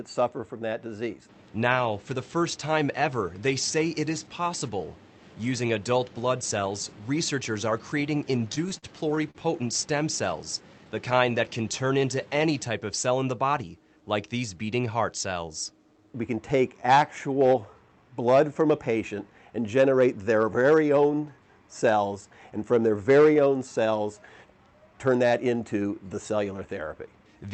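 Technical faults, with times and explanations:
8.52–9.37 s, repeated stalls (stutter): The sound catches and drags eight times in under a second. Packets came in late, so the jitter buffer kept running dry. Each time, the receiver stretched the last bit of sound to bridge the wait. These fills add up to 143 ms, about 17% of the span. The longest is 44 ms. Nothing is lost. The flow just halts and restarts, which gives the stuttering feel.
13.10–13.63 s and 24.93–25.53 s, jitter buffer speed-up: The audio briefly rushes forward at the same pitch. The buffer held more than its target, so the receiver cut out many tiny pieces, each one or a few pitch periods long, to shrink the delay. The first run plays at 108% speed and drops about 50 ms. The second plays at 109% and drops about 70 ms. Both sound hurried.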